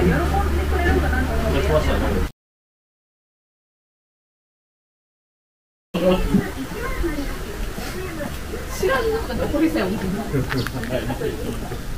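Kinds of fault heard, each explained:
Low bit depth without dither: the signal was likely truncated to around 6 bits, so grainy distortion, roughly 20 dB below it, follows the sound throughout.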